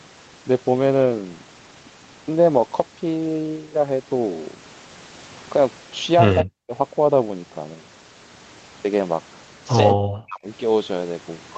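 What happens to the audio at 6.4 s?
A delayed copy of the voice, about 10 dB below it and lagging by 172 ms, slips through from 6.38 to 6.44 s, likely an echo leak from a loudspeaker the echo canceller didn't fully cancel. From 6.44 to 6.72 s the voice then dips, by up to about 40 dB and for roughly 200 ms in total, likely speech suppressed in double talk, where the canceller couldn't separate its own talker from the loudspeaker echo and turned both down.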